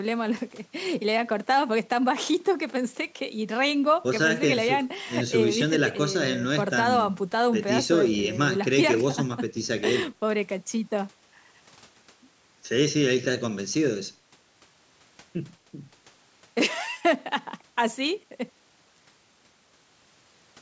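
An electrical switching spike occurs from 18.96 to 18.99 s, near the end of the speech: a sharp snap, or a tight burst of clicks, laid over the audio for about 20 ms. The likely cause is a nearby switch, motor or static discharge arcing briefly, with the audio line picking up that electrical pulse. The audio passed through call microphone processing, which trims the lowest bass and carries nothing above 8 kHz.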